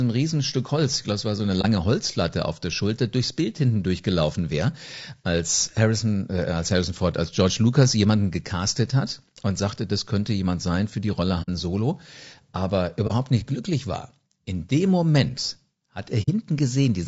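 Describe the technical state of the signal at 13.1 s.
AAC frame loss with muting occurs from 13.07 to 13.12 s. A missing block of coded audio, which fits a single lost frame, was replaced by silence, and the overlapping windows fade the sound out and back in, so it is heard as a brief soft-edged gap.

Around that gap, the speech has a rough, grainy texture with noise filling the spaces between harmonics and an artificial-sounding top band. This plainly audible damage is likely from low-delay AAC compression (AAC-ELD), whose short frames resolve pitch poorly, and it fits a bitrate around 32 kbps.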